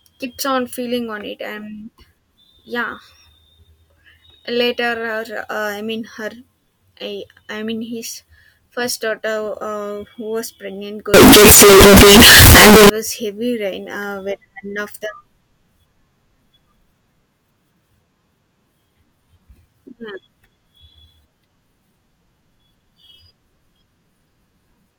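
From 11.14 s to 12.89 s the speech turns into very loud, harsh distortion, with quiet stretches as loud as the rest. The likely cause is signed and unsigned mixed up: 16-bit samples read with the wrong sign convention, so every zero crossing jumps across the full range.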